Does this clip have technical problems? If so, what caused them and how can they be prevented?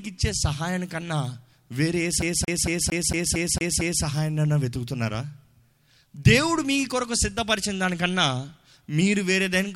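Yes. CD stuck on one turn: a scratch throws the laser back one track, so from 2.22 to 4.04 s a 0.23 s slice of speech stutters eight times. Clean or replace the damaged disc, or rip it with a secure ripper that re-reads bad sectors.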